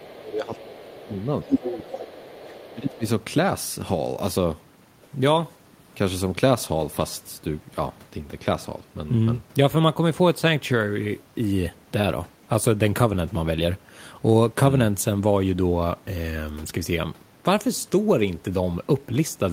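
From the start to 0.14 s, then at 0.52 to 0.91 s and 1.07 to 1.26 s, a faint second voice sits about 25 dB under the talker. This is the other side's voice leaking through, likely loudspeaker sound the echo canceller left in the microphone signal. Unlike suppression, it adds sound.

Across 0 to 1.13 s and again from 1.44 to 3.05 s, the talker's own voice dips by up to about 15 dB, for roughly a second in each stretch. This is speech suppressed in double talk, likely the canceller ducking everything while both sides spoke. It removes the talker rather than adding a voice.

Within that second stretch, the leaked voice returns at 1.52 to 1.97 s, this time about as loud as the talker, and again faintly at 2.13 to 2.96 s.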